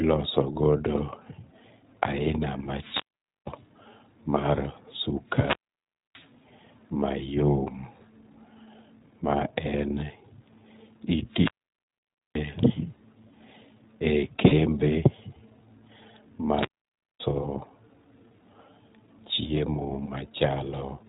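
The whole speech track runs through the iLBC codec, which fits its 15.2 kbps mode: band-limited below 4 kHz, a bit rough and synthetic. From 2.64 to 3.66 s there's a wireless microphone squelch dropout: the radio fades, hiss rises, and the output mutes for about half a second. It happens again from 11.27 to 12.44 s with a mute of nearly 0.9 s. Around 14.48 to 14.53 s, lost iLBC frames leave 40 ms of buzzy held vowel, which fits two 20 ms frames. Another squelch dropout follows from 16.49 to 17.25 s, muting for about 0.56 s. Then at 20.06 to 20.10 s there's a 20 ms concealment blip, which fits one lost frame, and the voice recovers right away.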